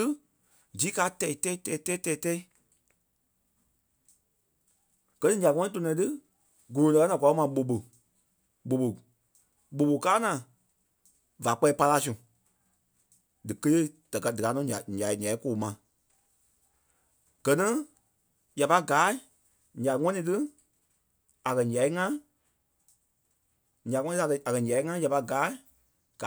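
Nothing technically wrong turns up anywhere in this speech recording, so there's no fault to point to.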